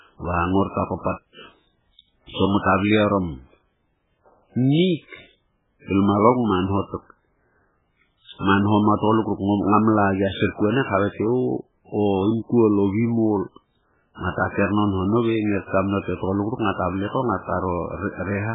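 A very low bitrate encode, likely MP3 compression, runs through the whole of this speech clip, with heavy codec damage. It points to a rate near 8 kbps. Nothing survives above 3.8 kHz, so the sound is dull and muffled, and weak frequency lines flicker between frames, giving a watery, swirly texture with smeared attacks.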